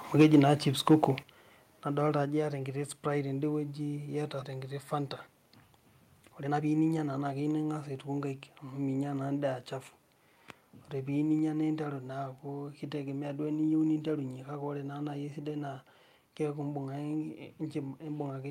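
A speech recording in which the microphone input was likely set too high, so peaks hit the converter's ceiling in microphone overload from 0.19 to 0.48 s (about 6 dB over) and from 0.87 to 1.04 s (about 4 dB over), squaring off a few percent of samples and giving the loudest syllables a harsh, crackling edge. The call software then apparently reacted by cutting the input in single microphone volume steps down of about 4 dB at 0.22 s, about 8 dB at 1.23 s and about 3 dB at 2.25 s, just before "iyata enkiti", and each time voice and background fall together abruptly. Around 4.41 to 4.43 s a stretch of audio was dropped in a skip ahead, so roughly a second of speech is gone and the two sides join with no gap. From 6.23 to 7.56 s a jitter buffer speed-up trims short pitch-period pieces repeatedly, removing about a fifth of a second, so speech runs at 117% speed with unchanged pitch and sounds hurried.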